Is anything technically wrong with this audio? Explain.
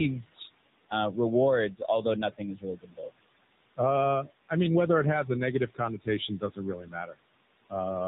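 Yes. Two faults run through the whole speech clip.

Noise suppressor artifacts are present from start to finish. Each frame, the bands judged to be steady noise are pulled down, here by about 19 dB, so the room noise, sitting about 16 dB below the speech, drops away in pauses and returns under the talking. A spectrogram shows near-empty gaps between phrases and patchy, flickering low-level texture beneath them.

The AMR narrowband mobile codec damage is plainly audible throughout. Speech is rebuilt from a vocal-tract model excited by sparse pulses, with nothing passed above 4 kHz. The buzzy, synthetic quality fits a mode of around 8 kbps. On a spectrogram everything above 4 kHz is a flat blank, and the harmonics look smeared and blocky.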